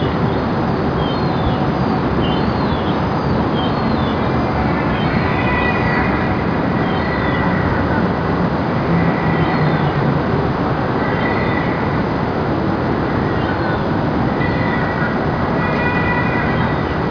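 From start to finish the sound has a gritty, metallic edge. High-pitched detail comes back as harsh tones that don't belong, sitting roughly 25 dB below the main sound, and the spectrum runs hard up to about 5.5 kHz before stopping. This is aliasing. The audio was cut to a lower sample rate, which fits a drop from 44.1 kHz to 11 kHz, without first removing content above 5.5 kHz. That content folded back down to unrelated frequencies.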